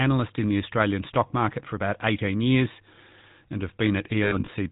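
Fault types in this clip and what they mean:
GSM full-rate codec: The speech passes through the original GSM coder, which rebuilds the voice from a vocal-tract model driven by sparse pulses. Nothing survives above 4 kHz. The damage is plainly audible as a buzzy, gravelly roughness throughout, which fits the 13 kbps full-rate mode.
lost GSM frames: Between 4.24 and 4.50 s, missing frames are patched by repeating the last good one. About 160 ms is lost across 260 ms. The longest gap is around 70 ms. It sounds like a rough metallic ring.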